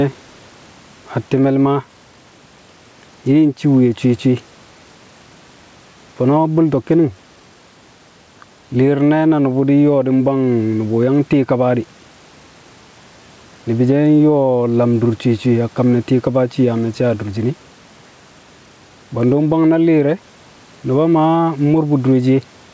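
Speech clip with gain pumping throughout, with a gain swing of around 10 dB; the low-level room noise sits about 39 dB below the speech. The likely cause is input gain set far too high, with a fast limiter clamping each peak. This flattens loud and soft passages into a squashed level.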